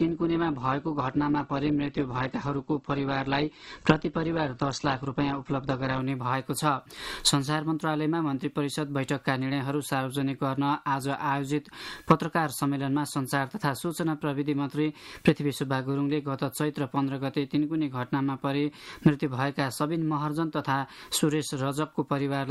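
From 0.0 to 6.0 s the clip shows an adaptive stream starting at a low bitrate: the player opened on a lean version to begin quickly, then switched up after measuring the connection. Until then nothing sits above about 8.1 kHz, so the sound is dull and smeared with codec artefacts, which fits a very low-rate Opus encode near 12 kbit/s. On a spectrogram the top band is empty until 6.0 s, then fills abruptly, with no gap in the waveform.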